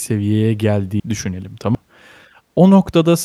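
At 1.00 s and again at 1.75 s the speech skips forward, losing about a third of a second each time, with the two sides butted together and no gap. This is audio missing between chunks, likely from processing in 1 s chunks and dropping material at each handover.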